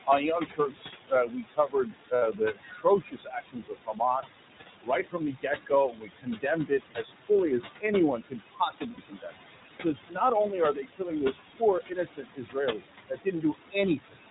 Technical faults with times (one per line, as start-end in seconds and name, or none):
0.00-14.30 noise suppressor artifacts
0.00-14.30 iLBC codec
0.47-4.41 speech cut by the noise suppressor
2.16-2.22 lost iLBC frames
4.82-7.84 speech cut by the noise suppressor
8.17-9.33 speech cut by the noise suppressor
8.92-8.99 lost iLBC frames
9.81-14.18 speech cut by the noise suppressor